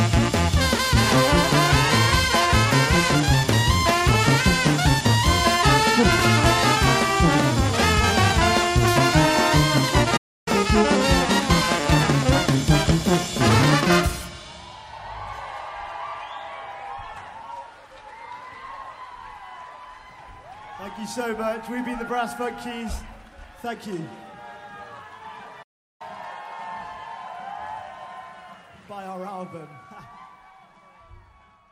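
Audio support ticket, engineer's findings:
Playback stall at 10.16–10.48 s. Output drops to silence for about 297 ms mid-flow, then resumes. Likely cause: player buffer underrun or a blocked playback thread starving the output device.

Playback stall at 25.62–26.02 s. Same symptom, longer gap of about 373 ms. Sound cuts out abruptly, then continues. Likely cause: the decode or playback thread failing to refill the buffer before it emptied.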